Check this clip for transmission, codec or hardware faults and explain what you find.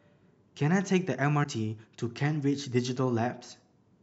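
One fault stands out, at 1.43 to 1.46 s in the speech: a brief garbled disturbance lasting about 30 ms, roughly one 26 ms MP3 frame. The likely cause is a broken MP3 bit reservoir: after lost frames, the next frame decodes borrowed bytes belonging to another frame.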